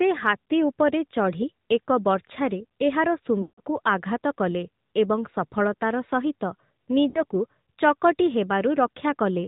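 From the start, the speech carries the sound of the AMR narrowband mobile codec. Band-limited to 8 kHz sampling, it passes nothing above 4 kHz, so the voice is muffled and lacks sibilant detail. Each 20 ms frame is rebuilt from a vocal-tract model excited by a few pulses, and at this rate, which fits the 10.2 kbps mode, the codec damage is plainly audible as a buzzy, synthetic edge on the voice.

Lost AMR speech frames occur at 3.42 to 3.60 s, right after "ବର୍ଚ୍ଛାରେ ଏହାର". About 160 ms of coded speech is missing, consistent with a run of eight frames. The decoder covers the gap by repeating the last good pitch and spectral settings at falling gain, so the sound stretches into a drawn-out tone and fades toward silence. A shorter loss follows at 7.10 to 7.23 s, after "ସଫଳତାର ସହିତ". Only about 40 ms is concealed there, and it is heard as a brief dip and warble.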